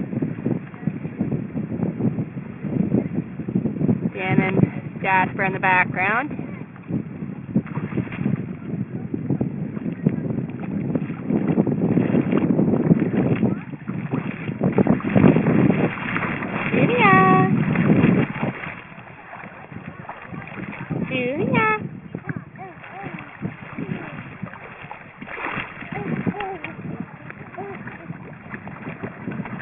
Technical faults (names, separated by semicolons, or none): aliasing